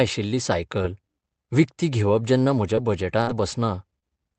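At 2.75 s, just after "विकती घेवप जेन्ना", a short concealed packet loss occurs. About 20 ms of the call arrived too late. The receiver extended the preceding sound to cover the hole, then blended back. It comes across as a brief smear.

From 2.77 to 2.79 s, a lost packet rebuilt from error correction follows. The next packet carried a rough low-rate copy, and the decoder played that instead. There is no gap, but those 20 ms sound grainier and noisier.

From 3.21 to 3.29 s there is a burst of packet loss. About 60 ms went missing. The receiver stretched the last sound and faded it down, leaving a held buzz or dying hiss. The audio then jumps ahead. Its final 20 ms, 3.27 to 3.29 s, is another rebuilt packet, again rougher.

At 3.99 to 4.04 s, a second short concealed packet loss leaves a quick wobble where about 20 ms was patched over. Throughout, the Opus call path's 8 kHz bandwidth caps the highs.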